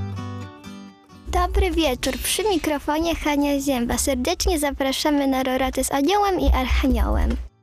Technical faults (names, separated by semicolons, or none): none